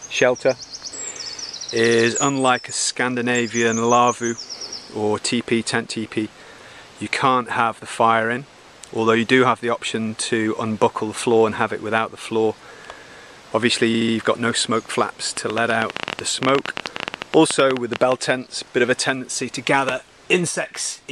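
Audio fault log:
1.26–1.33 s, repeated frames: a brief stutter as about 70 ms of audio plays twice, which fits a block of three compressed frames resent once.
13.93–14.14 s, repeated frames: a longer stammer as the same 70 ms block plays three extra times, adding about 0.21 s.
15.37–18.13 s, train of clicks: some forty similar clicks, about 13 per second at an uneven pace and about 15 dB above the sound, likely interference or a faulty connection.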